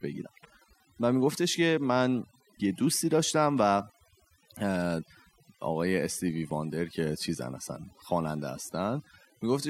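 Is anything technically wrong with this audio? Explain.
Yes, two problems. Overdone noise removal runs through the whole speech clip: the reducer is so aggressive that the background becomes near-silence with twinkly specks. There's also overlap between stream segments, giving small skips at 2.53 s and 6.51 s where overlapping segment timestamps made the player trim away about 6 and 16 milliseconds, which fits 2-second segments.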